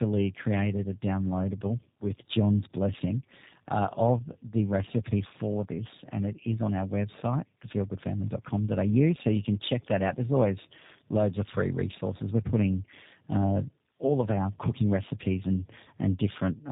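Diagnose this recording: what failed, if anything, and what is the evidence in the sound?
Tandem speech coding failed at the codec stage, and it affects the whole of the speech. The sound is rough, muffled and warbly in a way a single narrowband coder wouldn't produce, which points to two passes through a low-rate coder such as G.729A at 8 kbit/s, with a 64 kbit/s G.711 A-law link between them. On a spectrogram, energy stops at a hard ceiling near 3.7 kHz, and the harmonics look smeared and blurred. The mechanism is that each coder is fed the previous coder's already degraded output, so its errors stack on top of the earlier ones.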